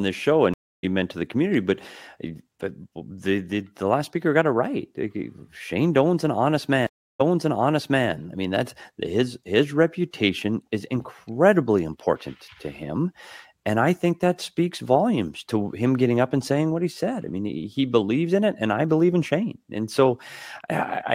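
Two stream reconnects break the speech. At 0.54 s, after "this show", about 0.29 s of silence falls and the audio resumes roughly 0.3 s later, at "meant to the community", skipping material. At 6.87 s, after "an honest", a 0.33 s silence ends with playback jumping 0.88 s earlier, repeating material before "I mean that's his" (event ends 8.08 s). Unlike a plain dropout, each gap lands the listener at a different point in the stream, because the player reconnected and restarted decoding elsewhere.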